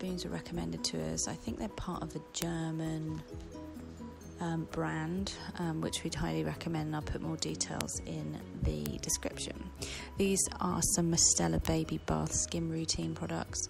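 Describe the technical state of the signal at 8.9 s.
At 8.86 s there is a bit error spike: a single sample jumps to about -8 dBFS and drops straight back. One flipped bit in storage or on a digital link shifted that sample's value by a power of two. It is heard as one sharp, broadband tick with no relation to the surrounding sound. Unlike a dropout or splice click, nothing is missing or misaligned before or after, and unlike clipping it lasts only one sample.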